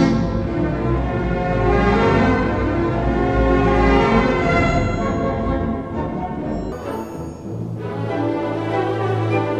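From 0.0 to 6.72 s, a section at the wrong speed plays at 0.608 times its recorded rate. Everything runs slow and drops about ten semitones in pitch, sounding deep and dragged. The likely cause is playback locked to a mismatched clock.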